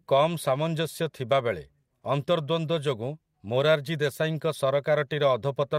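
No faults are audible anywhere in the recording.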